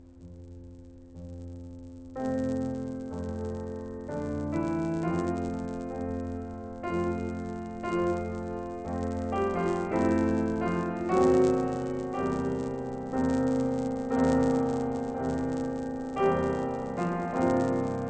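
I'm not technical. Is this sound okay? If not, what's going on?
No, not quite. All the way through this music there's a steady buzz, about 100 times a second. That's a resampler restarted on every block: the audio was converted in 10 ms chunks, each handled alone, so every chunk edge picks up a tiny tick.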